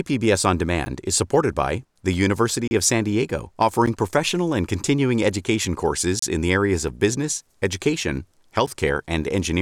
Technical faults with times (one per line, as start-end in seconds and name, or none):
0.85 block of digital silence
2.68-2.71 block of digital silence
3.86 block of digital silence
6.19-6.22 block of digital silence
8.66 block of digital silence